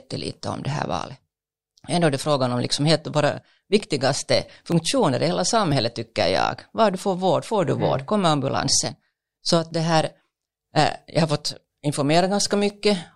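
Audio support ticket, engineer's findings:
Periodic USB or driver dropouts, 0.73–12.70 s, from "om det" onward. Bus or driver blocked about once per 1.00 s; roughly a millisecond of audio skipped each time. Regular ticks through the speech, about one per second.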